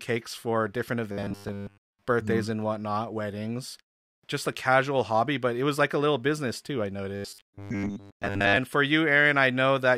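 From 1.12 to 2.02 s, just after "for different" and before "birthdays mm and whatnot", and again from 7.16 to 8.57 s after "little business too I", speech turns into a rigid metallic buzz fixed at 100 Hz, robotic sound from repeated short buffers. Most of the audio appears to be replaced, likely by looping a 10 ms chunk while real audio was skipped. Unlike a slower stutter, this imposes one steady buzz while loosely tracking the speech.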